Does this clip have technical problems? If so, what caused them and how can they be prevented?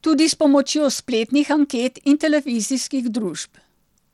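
Yes. Throughout the speech there is plainly audible codec damage, likely from Bluetooth SBC compression at a low bit pool, which fits a rate near 96 kbps. SBC splits the signal into a few wide sub-bands and allocates bits without a hearing model, so the upper bands starve: the treble flickers in and out, and a gritty, aliased grain sits on the sound. Unlike a simple low-pass filter, the top end comes and goes rather than stopping cleanly. Unlike low-bitrate MP3 or AAC, there is no swirly, watery warble, only coarse roughness. To prevent it, record over a wired connection or use a higher-quality Bluetooth codec and bit pool.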